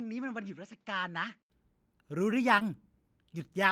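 From the start to 1.5 s the speech sounds duller and boxier, most likely because the input switched to a poorer device. A spectrogram shows nothing above 7.6 kHz in that stretch, a faint new noise floor around 50 dB below the speech, and a level about 5 dB lower. At 1.5 s an 80 ms silence appears as a flat gap in the waveform, and then the full band and level return.

At 2.59 s comes a short concealed packet loss. About 20 ms of audio never arrived in time. The decoder extended the preceding sound for roughly 11 ms and then blended back, so you hear a brief smear or wobble. On a spectrogram the preceding sound runs unnaturally steady and then softens into a short fade. The waveform shows the preceding sound carried on rather than a clean gap.

Overlapping that, from 2.60 to 2.62 s, one lost packet was rebuilt from error correction. The next packet carried a low-bitrate copy, so the decoder played 20 ms of substitute audio instead of leaving a hole. 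The result sounds rough and noisy. A spectrogram shows a 20 ms slice with blurrier, grainier energy than the surrounding frames, while the waveform stays continuous.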